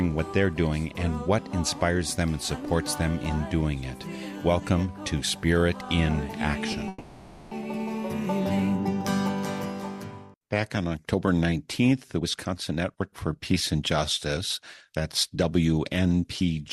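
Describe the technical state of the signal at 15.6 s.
A jitter buffer speed-up runs from 14.90 to 16.57 s. The receiver, holding more audio than it targets, repeatedly cut out short pitch-period-length pieces, trimming about a fifth of a second in total. The sound plays at about 111% speed, hurried but at unchanged pitch.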